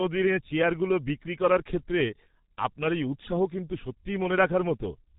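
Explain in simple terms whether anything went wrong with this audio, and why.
Something did go wrong, from start to finish. The speech has passed through the G.723.1 codec, an old internet-phone format. It drops every sound above 4 kHz and tracks the voice in coarse 30 ms steps. So it sounds heavily muffled and hoarse, with smeared consonants.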